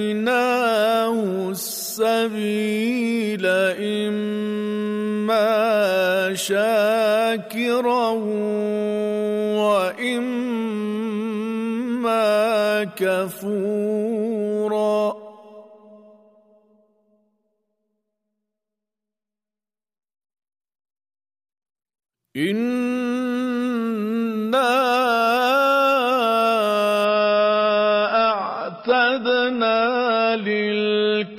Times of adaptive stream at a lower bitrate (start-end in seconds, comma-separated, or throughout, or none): 27.05-31.39